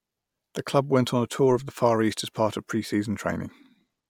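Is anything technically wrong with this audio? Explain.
No, nothing technically wrong can be heard in this speech recording. No faults turn up anywhere in it, so there is nothing to explain.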